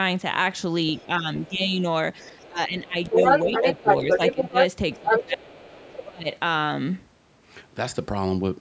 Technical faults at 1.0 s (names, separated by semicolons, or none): other side's voice leaking through; speech suppressed in double talk